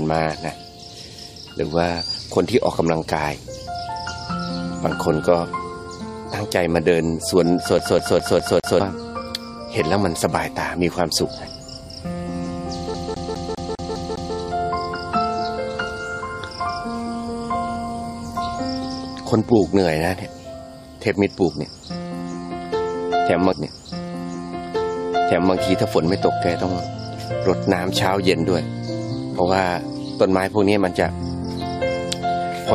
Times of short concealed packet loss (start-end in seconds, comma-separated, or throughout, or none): none